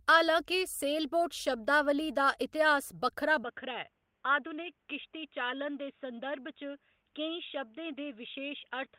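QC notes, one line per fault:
3.44 s to the end: input switched to a poorer device is the likely cause here. The sound goes dull and boxy at that point with no gap at the switch, and from then on there's nothing above 3.7 kHz, the sort of narrow band you get from a headset call profile or a cheaper mic. Level drops by about 5 dB, and a faint new background noise comes in, sitting well below the speech.
4.61 to 4.67 s: lost packet rebuilt from error correction. For about 40 ms the speech turns grainy and a bit noisy, but there's no dropout, which fits two lost packets whose low-bitrate backup copies, carried in the following packets, were decoded in their place. Those copies hold less detail than the originals, hence the rough, fuzzy patch instead of silence.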